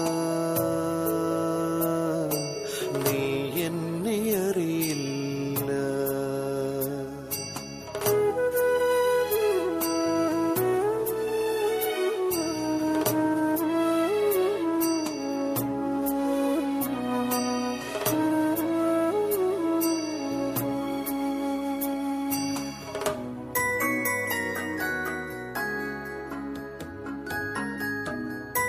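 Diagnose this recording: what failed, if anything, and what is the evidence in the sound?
Nothing failed in this recording, and there is no evidence in the sound of any fault.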